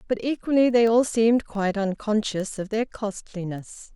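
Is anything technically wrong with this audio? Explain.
Yes. Word clock ticks run through the speech from 0.2 s to 3.92 s. The receiving device is not locked to the sender's clock, drifting by roughly 150 ppm. About every 0.15 s, a single sample slips. Each slip makes a sharp tick.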